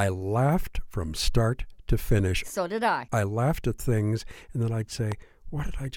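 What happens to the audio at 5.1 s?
A single loud pop lands from 5.12 to 5.14 s. It sits on top of the speech, which carries on underneath, and the pop peaks around 10 dB above it. The likely cause is a sudden voltage step or pulse entering the signal chain, such as a plug or switch transient, static discharge or a driver glitch. Later circuitry shapes that pulse into a brief thump. On a waveform it shows as a tall, narrow spike. On a spectrogram it appears as a thin vertical stripe spanning the full frequency range.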